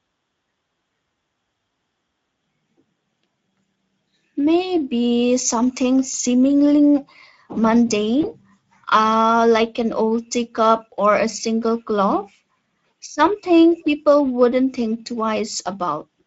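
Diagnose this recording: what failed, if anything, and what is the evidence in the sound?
Speex codec, throughout the clip, at the codec stage: the speech carries a plainly audible hoarse, noisy roughness. The sound fits a Speex mode near 17 kbps, where too few bits remain to code the excitation signal cleanly.

VoIP packet loss concealed by the speech codec, at the network stage, from 8.21 to 8.30 s, just before "uh like an old": a brief smeared patch that fades. The gap points to a single lost 20 ms frame. The decoder filled it by extrapolating its last pitch and filter at falling gain. Because each frame builds on the previous one, the distortion persists past the gap itself.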